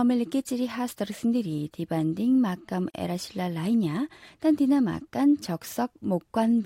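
At 2.90 s, between "끼찌리 하스터르슨들이 디반딩 막감" and "에라실라 라이냐 단디나 막간", the speech drops into a silence of about 37 ms that ends at 2.94 s. This is a gap at a join of encoded pieces. The audio was encoded in separate segments, which fits pieces about 4 s long, and joined without removing each encoder's start-up delay and final-frame padding. The result is a short hole with smeared edges, after which the speech resumes exactly where it stopped.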